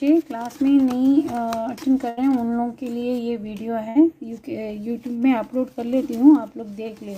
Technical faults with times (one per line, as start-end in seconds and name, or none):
2.09-2.19 burst of packet loss
3.89-3.97 burst of packet loss